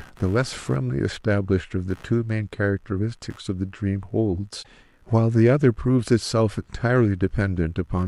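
From the first second to the end, a faint buzz sits well beneath the speech, pulsing at around seventy times a second. This is computer activity noise. Shifting load on the processor, graphics card or mouse disturbs the ground the audio circuit shares with them, and that electrical ripple leaks into the recording. Mains hum is a steady tone. This buzz has a pulsed, chirpy texture and follows the computer's workload rather than the speech.

At 4.59 s a burst of damaged data in a compressed stream breaks through, lasting until 4.67 s, about 80 ms. Corrupted bytes in the encoded file made the decoder misread those frames and lose its place. It then had to hunt for the next valid frame header before it could play on. The result is a brief glitch such as a chirp, squawk, click or short hole.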